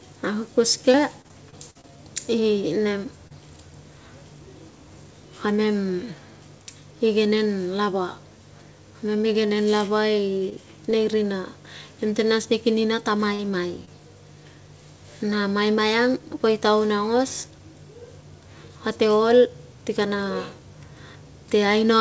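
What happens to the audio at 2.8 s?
At 2.8 s the speech is inside a stretch of repeated packet loss (robotic sound) running from 0.92 to 3.32 s. Eight short holes, the longest 47 ms, are patched by extending the preceding sound, giving choppy speech with pieces missing. A spectrogram shows smeared, repeated harmonic slices, and the waveform shows abrupt joins.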